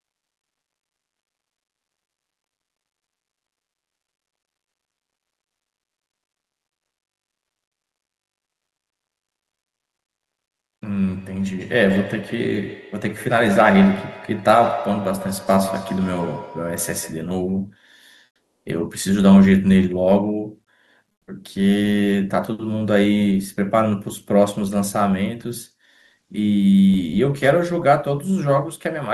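From 11.02 to 17.34 s each word returns about every 150 ms, thinner and ringing, at most about 12 dB under the speech: feedback echo between two devices on one call. At 18.26 s for 400 ms, and at 21.12 s for 160 ms, the background turns flat and featureless, about 3 dB and then about 8 dB quieter. This is comfort noise in place of the background, likely from discontinuous transmission in an Opus-type codec.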